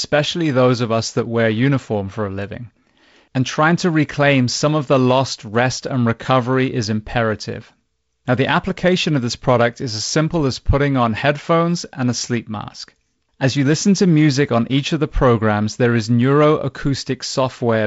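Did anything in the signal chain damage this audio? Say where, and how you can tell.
No, nothing in the chain damaged it: the band stops at about 7.7 kHz with the light upper-band hiss expected of G.722 wideband telephone coding, a normal codec path and not a fault.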